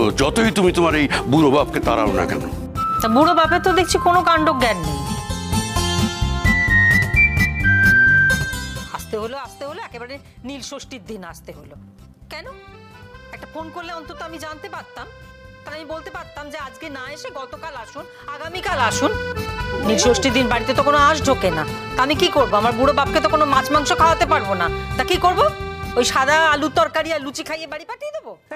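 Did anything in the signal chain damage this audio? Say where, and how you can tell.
Yes. A fine ticking zips across the sound from 8.68 to 9.4 s and again from 26.72 to 27.92 s, each time while the level drops by roughly 15 dB. This is zipper noise from a gain stage in the processing chain that applies the fade in unsmoothed 3 dB jumps, around seven per second in the first fall and around four in the second, and each abrupt jump leaves a small click.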